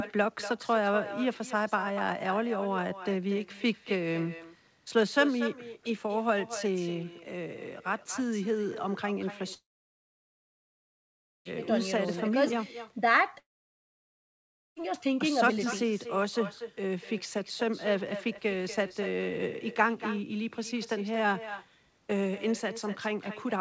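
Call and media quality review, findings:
Echo with no canceller, throughout: talker shadowed by a quieter, thinner copy about 12 dB down, returning after roughly a fifth of a second. Far-end loudspeaker pickup, no echo cancellation.

Long network dropouts at 9.54–11.47 s and 13.39–14.78 s: brief fading buzz or hiss, then silence. Likely lost packets, with concealment exhausted. Audio resumes with the gap content missing, band-limited to 8 kHz, consistent with G.722.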